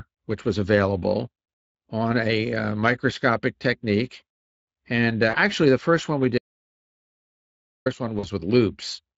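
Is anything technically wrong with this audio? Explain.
Yes, there are three kinds of fault in this speech.

Speex codec damage runs through the whole clip and is plainly audible. The voice has the hoarse, grainy texture of a CELP coder that has too few bits to model the excitation, which points to a Speex setting of roughly 20 kbps. Unlike a bandwidth limit, which only dulls the sound, this roughness sits inside the voice itself. It also never comes and goes, while the other faults are brief events.

VoIP packet loss concealed by the speech codec occurs at 5.29 to 5.36 s and again at 8.19 to 8.28 s. Each gap is about 40 ms, which fits two lost 20 ms frames. The decoder filled each gap by repeating its last pitch and filter at falling gain. The result is a short buzzy or noisy smear that fades, and the voice stays weak or distorted just after. It never drops to true silence.

An audio dropout to silence runs from 6.38 to 7.86 s, about 1.5 s. 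The speech cuts off mid-flow and returns just as abruptly. In between, the signal is silent, with no room tone and no fading tail. That silence sets it apart from the concealed packet loss, which keeps making sound through its gaps. The likely cause is an input that briefly went missing while recording continued to write silence.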